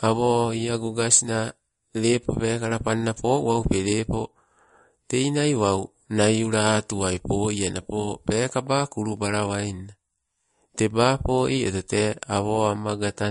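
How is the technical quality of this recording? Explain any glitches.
The technical quality is compromised by one fault throughout: the speech sounds watery and swirly, with audible smearing, and nothing sits above 10.6 kHz. This is likely MP3 compression at a low bitrate, near 40 kbps, where the encoder cut the treble and let weak frequency lines flicker between frames.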